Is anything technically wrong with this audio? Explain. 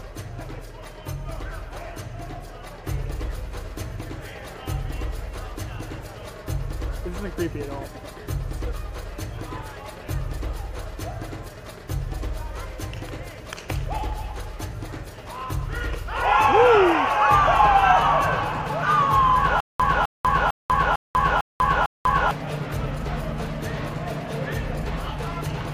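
Yes. From 19.60 to 22.31 s there is a stutter with silent gaps: a 258 ms burst repeats six times, each followed by 194 ms of digital silence, a 451 ms cycle. The likely cause is a stalled stream replaying its last fragment on each retry, losing the intervening audio.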